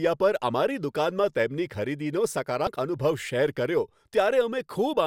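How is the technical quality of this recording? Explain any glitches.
The speech has one glitch, caused by damaged data in a compressed stream. It runs from 2.64 to 2.67 s, right after "તેમની ખરીદીનો". For about 30 ms, part of the encoded data was lost or corrupted. The decoder could not read those frames properly. It lost sync and had to search for the next valid frame header before playback resumed. The result is a brief blip that cuts across the speech.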